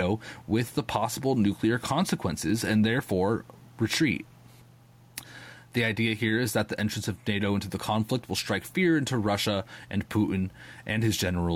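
Throughout, gain pumping swings the gain roughly 5 dB with loud syllables, likely from a fast limiter on excess gain. Unlike a gate, it never silences the background.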